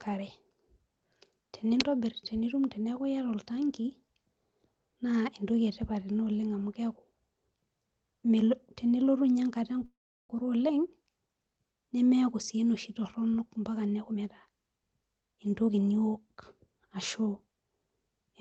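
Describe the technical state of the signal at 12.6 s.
At 12.6 s the signal is intact, with no dropout, glitch or distortion, only the steady band-limited character of the Opus call path it passed through.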